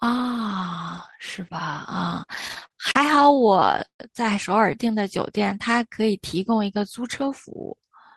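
A speech recording with two jitter-buffer faults. From 2.29 to 4.00 s, packets arrived late again and again, causing repeated stalls (stutter): twenty times the buffer ran dry and the receiver stretched the last sound, about 386 ms in total with the longest hold at 141 ms. Nothing is lost, but the speech halts and drags. From 5.89 to 6.35 s, a jitter buffer slow-down builds reserve by repeating single pitch periods, adding 44 ms. Speech runs at 92% speed with unchanged pitch, so sounds are drawn out.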